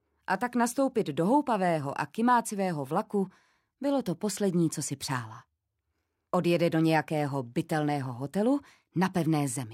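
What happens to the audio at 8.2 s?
Nothing goes wrong at 8.2 s; the audio plays through that moment intact, with no dropout, click, glitch or other fault.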